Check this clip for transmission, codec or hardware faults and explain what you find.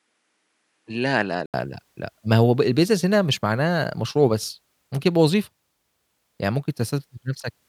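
One fault: from 0.0 to 1.54 s, the input likely switched to a poorer device. The speech is dull above 11 kHz, somewhat quieter, and carries a different noise floor. Then an 80 ms gap, and fuller sound returns. A changed level and noise floor mark a device swap, not a bandwidth-only filter.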